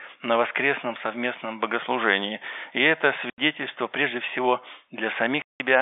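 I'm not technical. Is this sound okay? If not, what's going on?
No. The speech drops out abruptly twice, at 3.30 to 3.38 s and 5.42 to 5.60 s. This is packet loss filled with silence: chunks of audio never arrived, and the receiver played nothing in their place.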